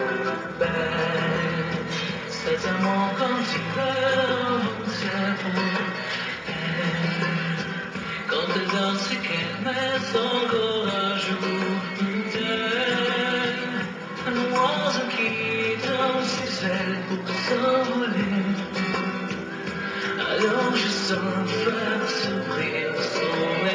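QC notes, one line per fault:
No faults heard anywhere in the audio.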